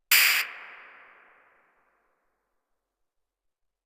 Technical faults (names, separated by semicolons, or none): skip ahead